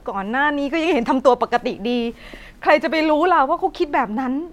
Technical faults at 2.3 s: none

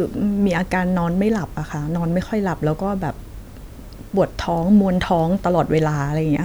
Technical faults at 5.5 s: none

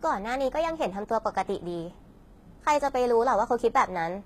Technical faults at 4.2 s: HE-AAC compression

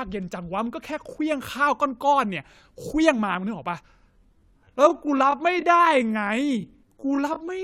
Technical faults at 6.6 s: time-stretched section

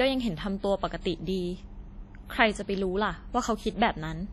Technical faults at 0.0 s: WMA compression

